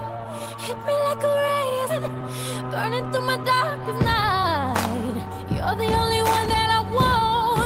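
At 1.89 s about a second of audio was dropped. Later material was already waiting behind it, and it was dropped, on the way or by the jitter buffer, rather than played. This is a skip ahead. Nothing was inserted to cover the loss, so the sound on one side of the cut runs straight into the sound on the other with no pause. The listener hears an abrupt forward jump, and the playback delay shrinks by roughly a second in one step.

From 1.99 s to 3.54 s the jitter buffer still held more audio than its target. To drain the excess, it repeatedly removed tiny slices, each a pitch period or a few long, about 150 ms in total. This jitter buffer speed-up plays that stretch at 108% speed with the pitch unchanged, so the sound comes across as slightly rushed and hurried until normal pacing returns at 3.54 s.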